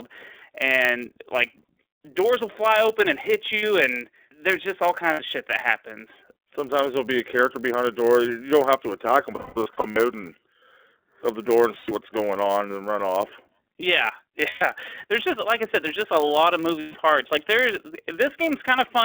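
The speech has passed through the iLBC codec, confined to a telephone band of about 300 Hz to 3.5 kHz. Each 30 ms frame's excitation is coded on its own, and the damage is plainly audible: the voice is intelligible but rough and slightly synthetic, thin at both ends, with a grainy texture that fits the 13.33 kbps mode. Nothing above 3.5 kHz survives, so sibilants lose their edge.

Running under all of it is a filter restarted on every block. The filter drops its state at each block boundary and begins again from silence, so every block opens with a small transient. Those transients repeat at 100 Hz and merge into a low buzz that rises and falls with the loudness of the speech, strongest on loud syllables and fading in pauses.

Lost iLBC frames interrupt the speech six times. When packets go missing, the decoder fills the gap by repeating the last pitch cycle blended with noise, so each hole becomes a brief held, buzzy vowel. 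These occur at 3.57 to 3.63 s and 5.13 to 5.20 s (60 ms each), 11.78 to 11.91 s (90 ms), 14.49 to 14.62 s (120 ms) and 16.80 to 16.96 s (150 ms). From 9.36 to 9.97 s, 390 ms of concealment is scattered over 600 ms, with the longest stretch around a fifth of a second. After each gap the voice snaps back almost at once.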